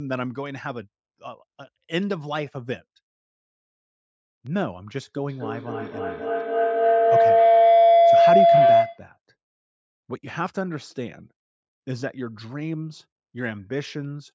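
At 5.29 s a feedback howl begins and runs until 9.14 s. Two devices in the same room share the call. Sound from one loudspeaker reaches the other microphone and comes back louder each time round. The repeats grow and narrow to a single tone of around 700 Hz. They come round about every 0.3 s, the loop's delay. At its peak it sits about 12 dB above the speech. The call's processing leaves nothing above 8 kHz, which is normal.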